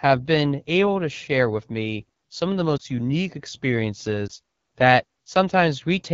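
Throughout, the speech carries the AMR wideband (HD Voice) codec at a low rate. The sound is rough and raspy, which fits the 8.85 kbit/s mode, the second lowest. The vocal tract model and pulse coding lack bits. Upper frequencies are noise-filled.

From 2.78 to 2.82 s, just after "me some of the", one lost AMR speech frame causes a brief dip. The decoder replays the last good settings at falling gain for 20 ms. It happens again from 4.27 to 4.32 s.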